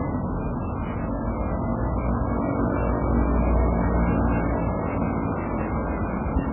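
An everyday-sound recording with heavy MP3 compression damage throughout, most likely from a very low bitrate around 8 kbps. Nothing survives above 2.9 kHz, and the remaining band swirls and warbles with smeared attacks. A plain low-pass filter would dull the top without that watery, frame-to-frame flicker.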